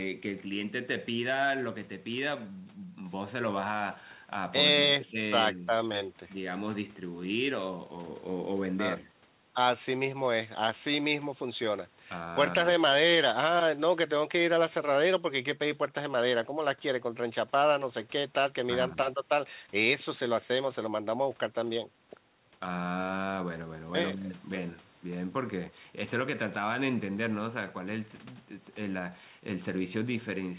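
There are no technical faults in this speech; the band-limited sound, with nothing above about 4 kHz, is simply what a normal call path produces.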